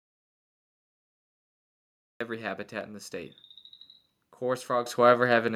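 Speech whose level, voice and background together, jumps up by about 7 dB at 4.86 s: a microphone volume step-up, where the call software raised the input volume in one step.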